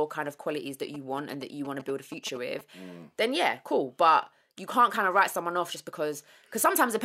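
Speech, with GSM signalling bursts cutting in from 0.94 to 2.61 s: that galloping dit-dit-dit of short 217 Hz buzzes, sitting roughly 15 dB under the speech. A nearby 2G phone was signalling, and the audio circuitry rectified its radio bursts.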